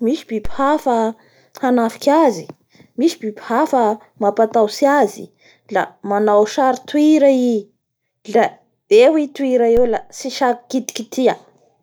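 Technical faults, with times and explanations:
0.45 s and 9.77 s, the second just after "la eo i toira" and before "eo la": DC step. The zero line jumps abruptly by about -13 dBFS, then drains away through a 2 Hz high-pass. Each jump sounds as a low thump while the speech continues unaffected.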